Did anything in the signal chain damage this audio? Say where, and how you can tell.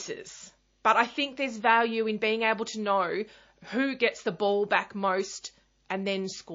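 Yes, and it sits at the codec stage for the whole clip. The speech has that watery, swirly quality, and s sounds come out metallic and chirpy, with consonant attacks smeared. That's MP3 compression, likely at a low bitrate, and the damage fits something around 32 kbps. Starved of bits, the encoder kept dropping weak frequency lines in and out frame by frame, which makes the swirl.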